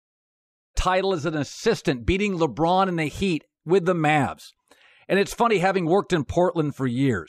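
No technical faults can be heard anywhere in the speech. At the start the level rises in a smooth fade-in from about half a second, reaching full level by 0.77 s with no click or hard edge.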